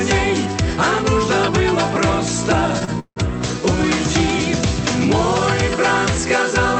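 At 2.85 s a short stall from a late packet occurs. One packet missed its slot, the jitter buffer ran dry, and the receiver stretched the last sound for about 27 ms until the packet turned up, then carried on from the same point. Nothing is lost, but everything after it lands 27 ms later, and the held sound comes across as a brief smear with a faint buzz, ending at 2.90 s.

From 2.99 to 3.19 s there is a call audio freeze, likely caused by packets held up in transit so that the jitter buffer emptied again. About 167 ms of filler covers the wait: the last sound is extended as a fading buzz that drops to roughly 70 ms of silence before the audio picks up exactly where it stopped. This adds another 167 ms of delay, and the coded sound, limited to 8 kHz by the Opus path, resumes intact.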